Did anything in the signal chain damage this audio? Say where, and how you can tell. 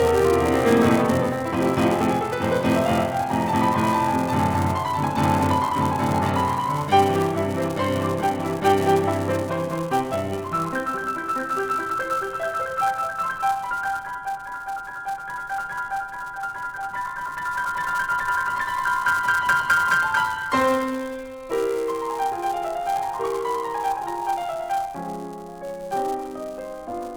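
Yes. Throughout the music a 200 Hz buzz rides on the signal, the mark of a filter restarted on every block in the block processing stage. Each 5 ms block begins from empty filter state with a small transient. Unlike mains hum, the buzz rises and falls with the music's level.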